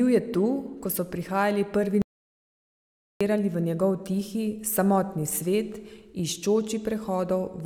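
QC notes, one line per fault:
2.02–3.21 s, audio dropout to silence: The speech cuts off right after "ko so prihajali prvi" and resumes mid-flow at "v njegov tihi samotni". The gap lasts about 1.19 s. It is dead silence with no room tone. That points to the input being lost while the recorder kept writing silence, likely from a disconnected device, a failed link or a stray mute. Whatever was spoken in that stretch is gone.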